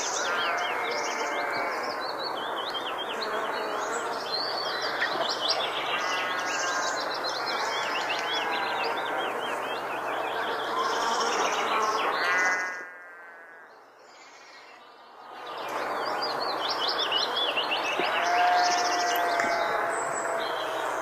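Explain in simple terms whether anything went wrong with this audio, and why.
Nothing went wrong here: the volume eases up and down like someone gently moving a fader, and that's just part of how these sounds were mixed, not a problem.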